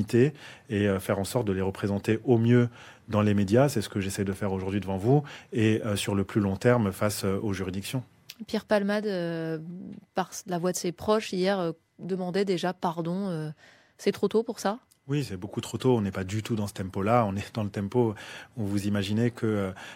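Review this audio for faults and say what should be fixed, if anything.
Two blocks of digital silence drop into the speech, at 1.42 s and 4.33 s. The first hole is only about 1.2 ms and the second about 3.9 ms, so neither is long enough to hear as a gap. Each one comes across as a tick or dip, because the waveform cuts out and back with no fade. That abrupt cut is what you get when the output buffer isn't filled in time. To prevent it, give the audio thread more buffer headroom or fix whatever is stalling it so every block is delivered before its deadline.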